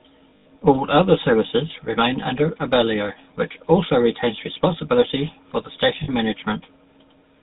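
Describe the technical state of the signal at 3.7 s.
At 3.7 s the speech carries GSM full-rate codec damage, as it does throughout. The vocal tract is modelled and fed a sparse, regular pulse excitation, giving a plainly buzzy, gravelly roughness that fits a rate near 13 kbps. A spectrogram shows nothing above 4 kHz.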